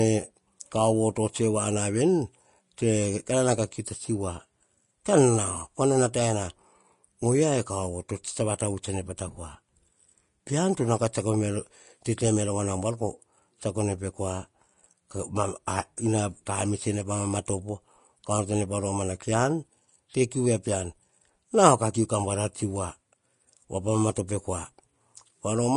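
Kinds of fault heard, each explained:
Vorbis compression: the speech sounds grainy and hissy, with nothing above 10.6 kHz, which fits a low bitrate near 34 kbps. The likely cause is Vorbis coding that cut the treble and quantised remaining detail so coarsely it turned into noise.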